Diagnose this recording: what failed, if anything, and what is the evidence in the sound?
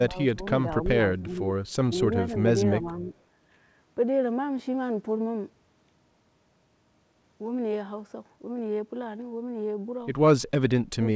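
Speech dips at 0–0.42, 1.13–1.42, 2.82–3.1 and 10.94–11.02 s, by up to about 25 dB. This is call processing, likely speech suppressed in double talk by the echo canceller.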